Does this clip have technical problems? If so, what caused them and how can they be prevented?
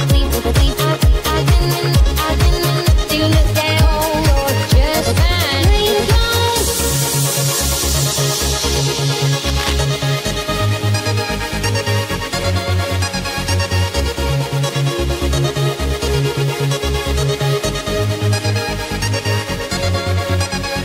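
Yes. Cable scratch noise from 9.45 to 9.74 s: a burst of uneven scratching roughly 10 dB below the sound, likely from a worn cable or connector shifting its contact resistance. Replacing worn leads, reseating connectors and securing cables so they can't move during recording prevents it.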